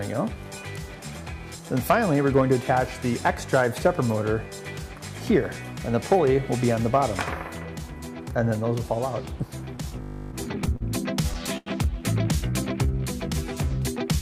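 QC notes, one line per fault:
9.65–10.82 s, repeated stalls (stutter): Seven short dropouts of packet delivery drain the jitter buffer, and each gap is bridged by extending the last sound. About 110 ms is filled this way, the longest 41 ms, with nothing lost. The audio drags and hiccups.
10.02–10.32 s, system hang loop: A 20 ms piece of audio repeats exactly 15 times while the host freezes and the hardware keeps replaying its ring buffer. The short loop gives a steady 50 Hz buzz. Essentially no audio is lost.
11.22–11.68 s, repeated stalls (stutter): Four more buffer underruns occur, concealed by continuing the preceding sound. About 119 ms is filled, roughly a quarter of this span, with nothing missing. The longest gap is 90 ms.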